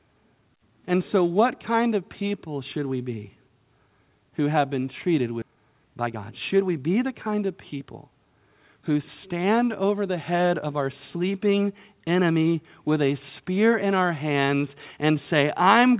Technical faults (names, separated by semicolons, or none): skip ahead; jitter buffer speed-up